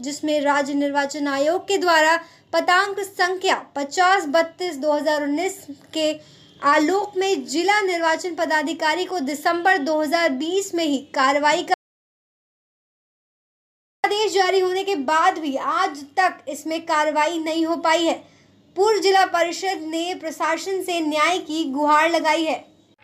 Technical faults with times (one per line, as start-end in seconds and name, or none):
11.74-14.04 audio dropout to silence